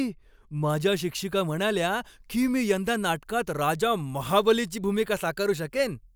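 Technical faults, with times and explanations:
0.70–6.15 s, pre-emphasis left on: From 0.70 s to the end of the speech, the treble stands about 8 dB higher at 10 kHz than at 1 kHz, a shelf-like lift that fits the CD 50/15 µs emphasis curve. That boost was put in before storage and should have been undone by a matching cut on playback. Because the cut never came, the sound turns thin and bright, and sibilants hiss harder than they should.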